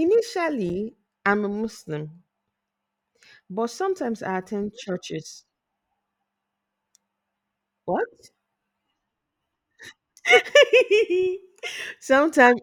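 A speech clip with a block of digital silence at 0.69 s, just before "I'm a". For about 5.3 ms the signal drops to silence and returns with no fade, heard as a tick or dip rather than a gap. This fits an unfilled 256-sample output buffer.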